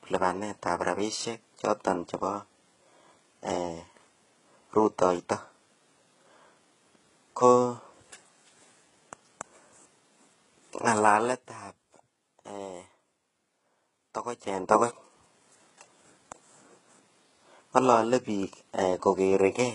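A speech clip with a gritty, lispy treble that stops dead above 11.1 kHz throughout, with heavy coding damage. The likely cause is HE-AAC compression at a very low bitrate, around 12 kbps, with the upper band rebuilt from copied lower harmonics. On a spectrogram this shows as a hard ceiling and smeared, misaligned harmonics above the crossover. Zipper noise appears twice. From 10.97 to 11.4 s the level drops about 10 dB, and from 14.41 to 14.81 s it rises about 10 dB. Each change moves in 2 dB steps at roughly twenty per second with no smoothing, so each step ticks audibly. The waveform envelope shows a visible staircase in both places, with faint vertical click lines on the spectrogram.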